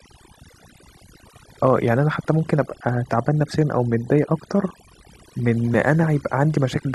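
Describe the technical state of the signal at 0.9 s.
At 0.9 s the speech is affected by overdone noise removal, which runs through the whole clip. The noise reduction is too aggressive. It pulls frequency bands down whenever they sit near its noise estimate, taking quiet speech detail with them. Background drops and breaks up into twinkling specks.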